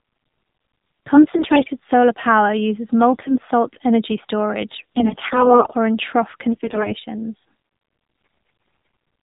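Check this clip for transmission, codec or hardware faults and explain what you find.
Two faults are present: mobile codec coding throughout, and bursts of corrupted frames.

AMR narrowband mobile codec, throughout: the speech is cut off above 4 kHz and sounds buzzy and synthetic, which fits AMR-NB at a low rate near 7.4 kbps. A plain band limit would stay clean rather than buzzy.

AMR bit errors at 1.16–1.71 s (before "solar power uses"), 3.14–3.33 s (between "solar power uses" and "salt energy"), 4.78–5.75 s, 6.53–6.94 s (after "or in trough") and 8.16–8.94 s. Flipped bits, roughly 7 to 15 percent, misplace the excitation pulses and skew the finer parameters. The voice turns hoarse and gargly. Unlike dropouts, it keeps its pitch and level.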